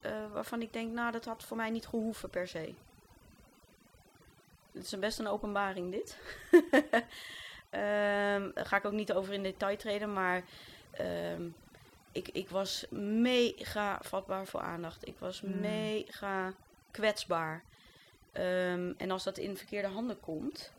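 From the start to the end, the speech carries overdone noise removal: the noise reduction was pushed so hard that frequency bands near the noise floor get switched off, taking quiet parts of the voice with them. Between phrases you get near silence with twinkly specks.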